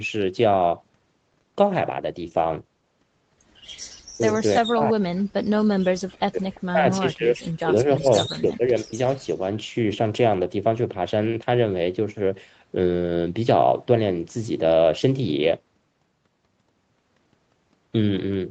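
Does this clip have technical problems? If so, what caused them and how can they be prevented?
Yes. The speech repeatedly dips and breaks up: briefly at 4.17 to 4.23 s, then 4.6 to 5.15 s, 6.02 to 6.46 s, 6.74 to 8.09 s and 8.28 to 8.96 s, falling by roughly 25 to 40 dB at its deepest. This is speech suppressed in double talk. The likely cause is that both ends were talking together, so the echo canceller could not tell this talker from loudspeaker echo and attenuated everything. Better echo cancellation with reliable double-talk detection, or headsets instead of speakerphones, prevents it.

At 6.55 to 6.6 s a faint scrap of delayed voice, about 30 dB below the speech and trailing it by 345 ms, slips through. This is an echo leak. The far end's loudspeaker output was likely picked up by its microphone and not fully cancelled, so a delayed copy returned down the line. Using headphones at the far end, or lowering its speaker volume and moving the microphone away from the loudspeaker, prevents it.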